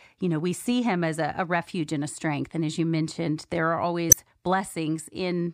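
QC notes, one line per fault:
4.09–4.14 s, damaged data in a compressed stream: a brief glitch of about 40 ms cuts across the speech. Corrupted bytes leave the decoder misreading or refusing a frame and searching for the next valid header, so the real signal there is garbled or lost. On a spectrogram it appears as a sharp vertical break unrelated to the surrounding harmonics. The waveform shows an abrupt disruption that breaks the speech envelope.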